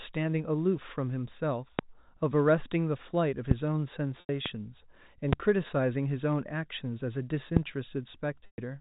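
Loud pops at 1.79, 3.51, 4.46, 5.33 and 7.57 s, likely electrical clicks, show as thin full-height spikes roughly 15 to 25 dB above the speech. Packet loss with pitch repetition spans 4.20 to 4.29 s (90 ms) and 8.46 to 8.58 s (120 ms): the last pitch cycle is looped, heard as a buzzy held tone fading out, and shows as flat, evenly repeated harmonic striations within the telephone band's 4 kHz ceiling.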